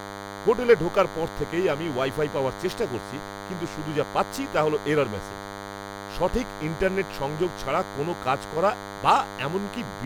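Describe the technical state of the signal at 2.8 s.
At 2.8 s a thin, steady buzz sits under the speech, fairly prominent and not far below the talker, with a rasp from its many harmonics stacked above a 100 Hz fundamental. It is DECT cordless phone buzz, present across the whole clip rather than just at this point. A nearby DECT handset or base station transmits a short radio burst every 10 ms, and the audio circuitry rectifies those bursts into a 100 Hz pulse train.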